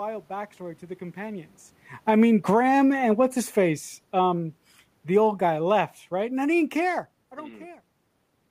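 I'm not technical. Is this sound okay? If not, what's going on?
No. The level of the recording keeps shifting on its own. The main problem is automatic gain falling. The recorder decided the sound was too loud and slowly turned itself down. This happens twice, from 1.94 to 4.48 seconds and again from 5.01 to 7.09 seconds. Each time the speech sinks, and the room noise behind it sinks along with it. That shared drop is how you can tell it is the equipment, not the person.

There is also a brief automatic gain rising, from 2.58 to 3.05 seconds, in the middle of the first dip. Here the recorder thought the sound had become too quiet and turned itself back up for about half a second. Speech and background swell together. Then the downward drift carries on. This back-and-forth makes the loudness feel unsteady. Separately, around 1.5 and 7.0 seconds the speaker seems to shift position, which changes the voice alone.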